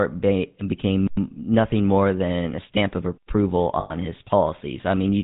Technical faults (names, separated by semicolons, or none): GSM full-rate codec; gap between chunks; lost GSM frames